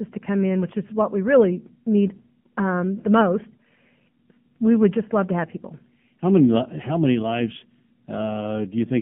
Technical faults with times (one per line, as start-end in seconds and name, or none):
0.00-9.01 AMR narrowband mobile codec